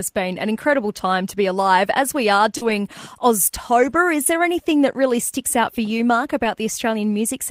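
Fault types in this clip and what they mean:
Lost packet rebuilt from error correction: Lost stretches were replaced by low-bitrate copies carried in the following packets, so nothing drops out. The sound just turns rougher and noisier, about 100 ms after "been an", 60 ms after "we are", and 80 ms before "is there anything that".
Short concealed packet loss: Around 2.57 to 2.63 s, about 40 ms never arrived, so the decoder extended the preceding sound to fill it. The result is a brief smear or wobble, not a coarse copy, and it runs straight into the rebuilt stretch.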